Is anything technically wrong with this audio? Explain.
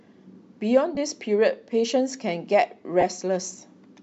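Yes. Lost LE Audio frames at 0.95 to 0.97 s and 3.01 to 3.04 s: about 20 ms each, fitting two 10 ms LC3 frames. The decoder refills them with the previous spectrum, sign-scrambled, causing a brief noisy smear in the speech, seen as grainy vertical bands on a spectrogram.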